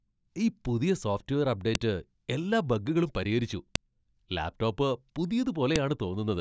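Separate WAV pieces about 2 s long were joined without stripping their headers, so the header bytes of this speech play as samples. The result is a sharp, loud click at 1.75 s, between "ഈ പുതിയ സോഫ്റ്റ്വെയർ" and "എല്ലാ ബഗ്ഗുകളും പരിഹരിച്ചു", at 3.75 s after "എല്ലാ ബഗ്ഗുകളും പരിഹരിച്ചു", and at 5.76 s: a file header played as audio.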